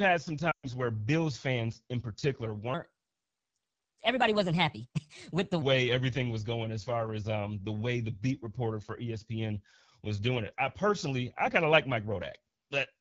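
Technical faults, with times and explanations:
Throughout, AMR wideband (HD Voice) codec: the speech has a rough, raspy grain that points to one of the two lowest AMR-WB modes, consistent with 8.85 kbit/s. At that rate the pulse-driven vocal tract model cannot follow the voice closely below 6.4 kHz, and the band above is filled with shaped noise. Unlike narrowband AMR, the top end still extends toward 7 kHz. Unlike packet loss, the damage is steady rather than in bursts.
0.51 to 0.71 s, lost AMR speech frames: for about 120 ms the sound fades out, then returns weak and rough. That length fits a run of six consecutive 20 ms frames failing their checksum. The decoder kept reusing the last good pitch and vocal tract settings while lowering the gain, so the sound drops to near silence within two frames, as wideband does. This gradual concealed fade distinguishes it from a hard dropout or a click, which would cut off abruptly.
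2.74 to 5.62 s, section at the wrong speed: after "fans in particular" the speech plays 1.24 times too fast until "everything was going as". It sounds hurried and about four semitones higher. The likely cause is a stretch of audio resampled or played against the wrong clock. Tempo and pitch rise together, which separates it from time-stretching, where pitch would stay put, and from a pitch-shift effect, where the pace would be unchanged.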